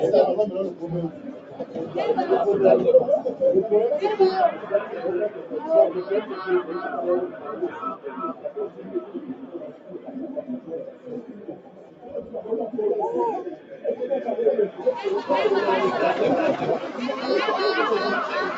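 The noise suppressor was applied to music or sounds throughout the clip. A speech-oriented suppressor treats sustained tones, ambience and reverberant tails as noise and pulls them down, while transients pass. The gain it applies keeps shifting, with level swings of about 10 dB, so held material pumps and thins rather than sitting steady. Beneath this, the call path's band limit is audible, with nothing above 8 kHz.

Sound cut by the noise suppressor occurs at 0.7 to 1.95 s, 4.52 to 4.93 s, 5.29 to 5.55 s, 7.28 to 12.34 s and 13.56 to 13.84 s. In each span the suppressor misjudges the sustained or decaying part of the sound as noise and drops it by about 6 to 8 dB at its deepest. Attacks survive but the tails sink or end early. The long span from 7.28 s is dipped for around three seconds in total, the first span for about a second, and the brief ones for a fraction of a second each.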